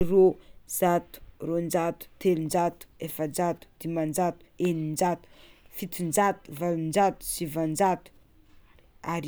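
No technical faults are audible anywhere in the recording.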